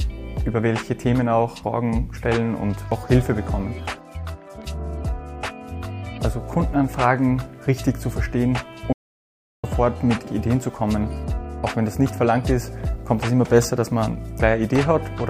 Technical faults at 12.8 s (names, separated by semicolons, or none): none